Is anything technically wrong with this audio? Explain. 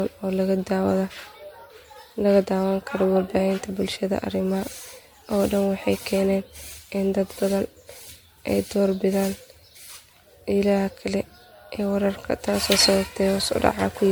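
Yes. Throughout the speech, the sound is swirly, smeared and hollow, with blurred consonant attacks and nothing above 19.9 kHz. This is generation loss, likely from MP3 encoding repeated around ten times at a rate near 96 kbit/s. Each pass requantised on a shifted frame grid, so noise and spectral holes built up.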